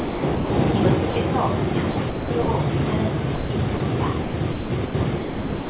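A voice detector at the sending end, likely misjudging quiet sound as background, keeps gating the signal. From 0.0 to 0.5 s the sound is chopped by the voice detector: about 380 ms is swapped for comfort noise, so the sound stutters. Shorter dropouts follow, where sound is dropped by the voice detector and comfort noise fills in: 60 ms at 1.10–1.16 s, 150 ms at 3.35–3.50 s and 30 ms at 3.77–3.80 s. Chopping returns at 1.91–2.48 s, with about 330 ms replaced, and again from 4.22 s to the end, where about 910 ms gives way to comfort noise. Throughout, the narrowband call codec leaves nothing above 4 kHz.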